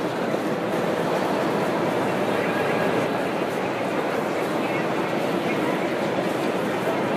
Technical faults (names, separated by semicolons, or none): doubled audio track